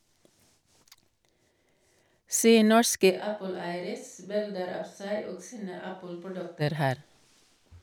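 At 3.12 s the speech turns suddenly hollow and roomy, thinner in the bass and about 10 dB quieter, with faint room noise underneath, until it snaps back at 6.60 s. This is likely a switch to a distant microphone, replacing the close one.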